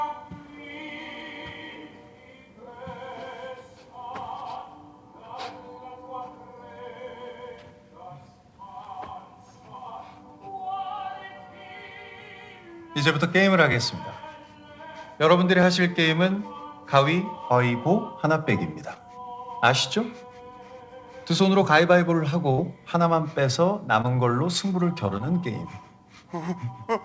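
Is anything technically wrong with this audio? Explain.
Yes. Playback and network faults interrupt the audio several times, heard over a call path whose G.722-style coding leaves nothing above 8 kHz.

From 8.84 to 8.86 s and again from 13.72 to 13.75 s there is a repeated buffer: fresh audio arrived late, so the device replayed its last block, about 12 ms long (which fits a 512-sample buffer), two extra times. The result is a tiny three-fold stutter that lands as a brief buzzy click.

Short concealed packet loss occurs at 18.94 to 18.97 s, 24.02 to 24.06 s and 25.18 to 25.22 s. Each time, about 20 ms of audio missed the decoder, and the receiver extended the preceding sound for roughly 15 to 22 ms before blending back. This leaves a quick smear or wobble.

A burst of packet loss spans 22.51 to 22.60 s. About 60 ms never arrived, and the receiver stretched the last sound for about 62 ms while fading it down. 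This produces a held buzz or fading hiss, and the audio resumes with that stretch missing.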